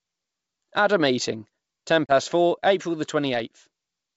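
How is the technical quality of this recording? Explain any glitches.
The recording has one glitch, a packet loss on an ADPCM call in G.722 wideband telephone audio. From 2.06 to 2.12 s, just after "a meeting ten", about three packets (30 ms) drop to a hard-edged silence. The decoder's predictor and step size then lag the sender's, so the speech returns slightly distorted before it settles. That recovery transient sets it apart from a clean dropout.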